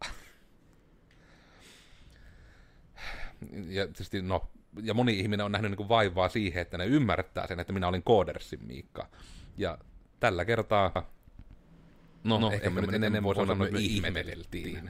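From 10.96 s, after "tällä kertaa", to the end, a doubled audio track appears: an equally loud, dry copy trails by about a tenth of a second, starting abruptly without echo decay, likely from a second capture path.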